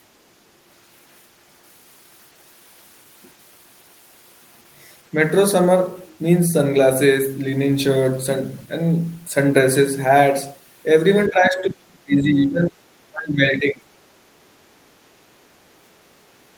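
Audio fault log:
11.29–12.86 s, speech suppressed in double talk: the speech sinks by around 35 dB, likely an echo canceller muting it while the far side also talks.
13.08–13.91 s, speech suppressed in double talk: a shallower dip of around 25 dB, likely the canceller again failing to separate local speech from loudspeaker echo.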